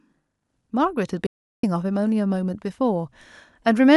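At 1.27 s the speech cuts out abruptly and returns at 1.63 s. This is an audio dropout to silence. The gap is silent, with no room tone, lasting about 0.37 s. The input was likely lost while the recording kept writing silence. Whatever was said there is gone.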